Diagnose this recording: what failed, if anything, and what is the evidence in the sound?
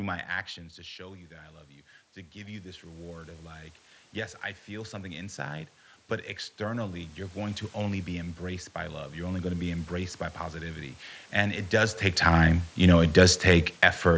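The failure is automatic gain rising in the call processing stage. The speech level creeps up three times: from 0.56 to 1.59 s by about 4 dB, from 2.32 to 5.75 s by about 10 dB, and from 6.63 to 11.05 s by about 6 dB. The first two follow input drops of about 14 dB, so the AGC is lifting its gain to recover the level. What separates this from the talker moving, as happens near 0.5 s and 12 s, is that the room noise swells along with the speech.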